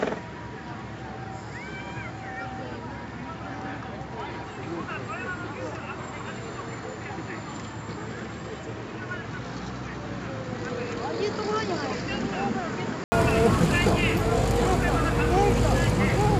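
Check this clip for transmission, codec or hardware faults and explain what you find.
One fault is present. From 0.0 to 13.12 s, the input was likely switched to a poorer device that passes nothing above 7.6 kHz. The sound is dull and boxy, quieter by roughly 10 dB, and carries its own background noise about 30 dB down. An 80 ms silence marks the switch back to fuller sound.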